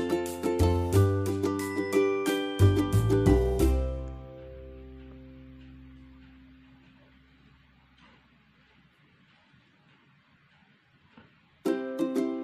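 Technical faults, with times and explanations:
No technical faults can be heard in this recording.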